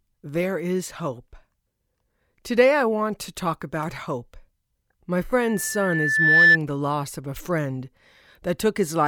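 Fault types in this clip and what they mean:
Loudspeaker feedback squeal: a microphone is hearing the loudspeaker it drives, and at one frequency the round trip through the loop gives more gain than it loses, so that tone feeds on itself. Here a pure tone near 1.8 kHz swells over roughly a second from 5.38 s, peaking around 10 dB above the speech, and stops at 6.58 s, just before "the loss of a". Its steady single pitch that grows on its own sets it apart from a mains hum or whistle of fixed level.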